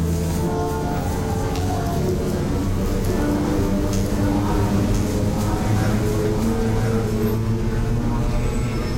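From about 3.06 s to 7.36 s, the sound is heard twice: a second, full-band copy trails the original by roughly a second and sits about 5 dB below it. This is a doubled audio track. The trailing copy carries no decay or room colour, so it reads as a flat repeat rather than an echo. It cuts in and out abruptly at both ends. The likely cause is the same signal being captured again through a slower path, or an edit leaving two offset copies in the mix.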